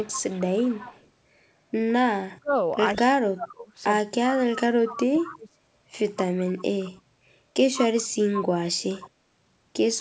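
From 0.0 to 1.09 s an echo leak is audible: a copy of the speech trails by 155 ms at about 20 dB below it, likely from a loudspeaker whose echo canceller let residual pickup through. Between 2.1 and 2.55 s, and again from 2.97 to 5.49 s, speech suppressed in double talk appears. The level dips by roughly 40 dB, likely because the canceller could not separate the near talker from echo while both sides spoke, so it attenuated everything. Inside that span, echo leaks at 4.38 to 4.43 s and at 4.99 to 5.3 s, the latter near about −15 dB. Later leaks at 6.38 to 6.9 s (about −25 dB) and 8.9 to 9.09 s keep the same 155 ms lag. Throughout, the audio stops at 8 kHz, consistent with a G.722 call path.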